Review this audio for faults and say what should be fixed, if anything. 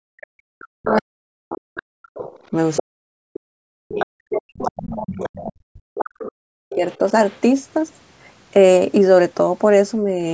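The other side's voice leaking through shows up at 0.21–0.27, 0.86–1.02, 1.77–2.83, 3.88–4.06 and 4.61–7.4 s. It sits roughly 10 to 30 dB under the talker and is likely loudspeaker echo the canceller didn't fully remove.

Speech suppressed in double talk runs through most of 0.3–7.05 s, with dips as deep as about 40 dB, plus a slight dip around 10.03–10.19 s. The canceller likely turned everything down while both sides were talking at once.

A headset, or better echo canceller tuning with a stronger double-talk detector, would head off both problems.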